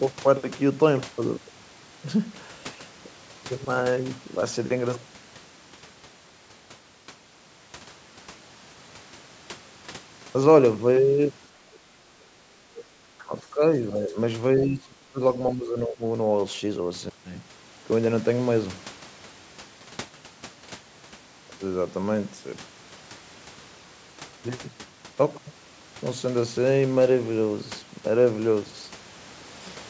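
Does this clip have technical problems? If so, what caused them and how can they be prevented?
Yes. The far end's voice leaks through at 11.74 to 11.79 s and 12.77 to 12.83 s. The talker's device was likely playing the other side over a loudspeaker, and the echo canceller did not fully remove it from the microphone. Brief scraps of a second voice get through, faint at first (around 30 dB below the speech) and then clearer (around 20 dB below). Using a headset, or keeping the loudspeaker volume moderate and away from the microphone, would prevent it.

Speech is suppressed in double talk at 12.67 to 12.73 s, 13.05 to 13.62 s, 13.81 to 14.16 s, 14.57 to 15.21 s and 15.53 to 16.01 s. While both sides spoke at once, the echo canceller likely could not tell the talker from the loudspeaker echo, so it turned everything down. The talker's voice dips by about 15, 20, 5, 25 and 10 dB, and is deepest around 14.6 to 15.2 s. 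A headset or a better double-talk-capable echo canceller would prevent this.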